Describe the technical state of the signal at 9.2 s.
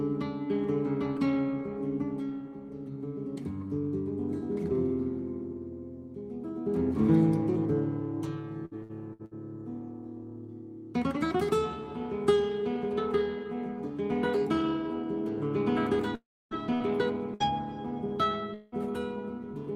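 At 9.2 s the signal sits inside a burst of repeated packet loss (robotic sound) running from 8.65 to 9.34 s. Four dropouts, the longest 60 ms, are each filled by extending the preceding audio, concealing about 35% of the span and producing choppy output with pieces missing.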